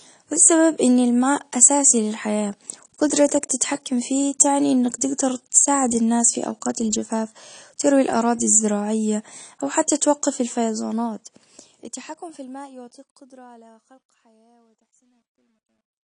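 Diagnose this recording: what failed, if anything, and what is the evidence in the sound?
The speech sounds dull and band-limited from start to finish: nothing is present above about 10.1 kHz, and coding damage is plainly audible throughout. This points to the codec stage, most likely AAC compression (AAC-LC) at a low bitrate, which fits roughly 32 kbps. With so few bits, the encoder lowers its cut-off and quantises the remaining bands coarsely against its hearing model.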